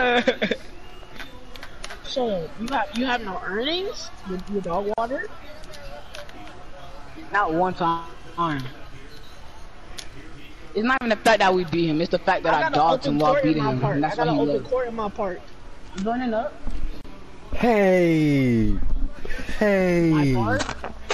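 MP3 compression runs throughout, leaving the sound watery and swirly with smeared attacks, likely from MP3 coding at a low bitrate around 64 kbps. A gap at a join of encoded pieces opens at 4.94 s, 10.98 s and 17.01 s, every 6 s. These are gaps of about 41 ms, 34 ms and 34 ms with smeared edges, caused by encoder start delay and end padding left in at each join, and the sound then carries on from where it stopped.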